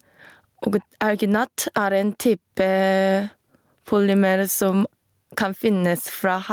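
Gain pumping runs throughout the speech: the gain swings around 15 dB, squashing the sound so loud and soft parts sit closer in level, likely from excessive input gain driving a fast limiter.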